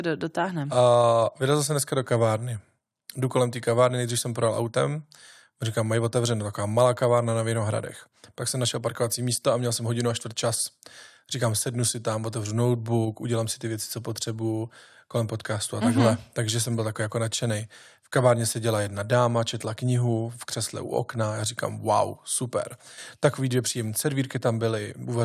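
Nothing in this speech recording stands out as a technical fault, so there's no problem here to point to or explain.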